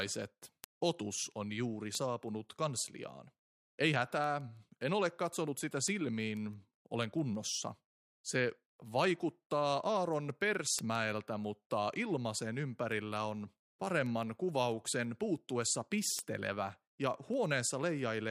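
From 0.15 s to 18.16 s, sharp ticks recur about every 0.15 s. These are word clock ticks: an unlocked receiver's clock drifts past the sender's and slips one sample each time.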